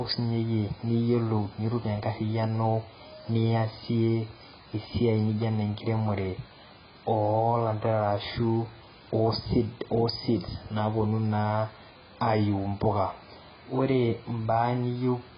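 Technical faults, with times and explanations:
Throughout: AAC compression. The speech stops sharply at 5 kHz and sounds dull and smeared, with a warbling, fizzy texture on sustained sounds and sibilants. This is likely heavy AAC-LC coding at around 12 kbps, which lowers the cut-off and starves the remaining bands of bits.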